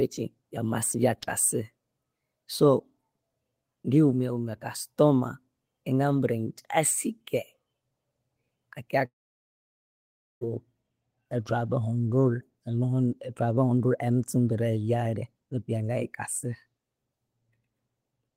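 From 9.05 to 10.43 s the speech turns into a fading buzz and then 1.3 s of silence, likely a long network dropout. It resumes with that stretch lost, not delayed.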